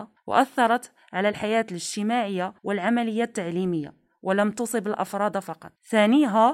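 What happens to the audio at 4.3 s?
Nothing goes wrong at 4.3 s; the speech carries on intact through that moment with no dropout, click or distortion.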